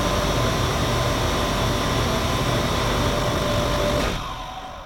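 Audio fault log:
3.08–4.85 s, time-stretched section: from 3.08 s to the end the sound suddenly runs about 1.8 times faster while its pitch holds steady, so it comes across as rushed. The likely cause is software squeezing this part to fit a shorter length, keeping pitch by dropping short slices. On a spectrogram the harmonic bands stay at the same heights while events crowd closer together in time, and the waveform shows tiny splice seams where pieces were removed.
4.16 s, damaged data in a compressed stream: a brief glitch, under 20 ms, cuts into the sped-up passage. Corrupted bytes in the compressed stream made the decoder misread or refuse a frame, lose sync and hunt for the next frame header before normal decoding resumes. A spectrogram shows a thin vertical break in the surrounding bands, and the waveform shows a small discontinuity.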